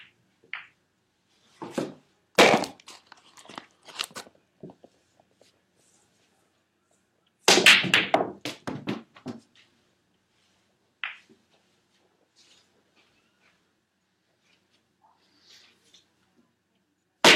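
No technical faults are audible anywhere in this recording of sounds.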